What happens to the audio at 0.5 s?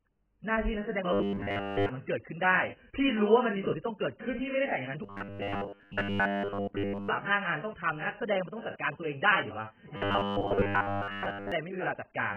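At 0.5 s the speech is dull and smeared from heavy AAC compression, likely at a very low bitrate near 9 kbps, running throughout; spectrograms show a lowered high-frequency cut-off.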